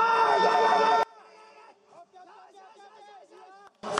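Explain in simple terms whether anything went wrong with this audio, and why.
From 1.03 to 3.83 s the sound nearly vanishes into a faint trace. This is likely one channel inverted, cancelling on mono playback, not simple dropout or muting.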